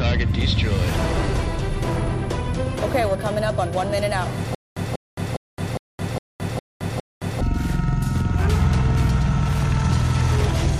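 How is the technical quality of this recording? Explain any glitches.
The recording has one clear glitch: a stutter with silent gaps from 4.55 s to 7.41 s. A short burst of sound, about 191 ms long, repeats seven times. Each repeat is followed by roughly 218 ms of dead digital silence, so the pattern recurs every 409 ms. The likely cause is a stalled player or stream that replayed its last buffered fragment at each retry and then ran dry. The audio meant for that span is missing.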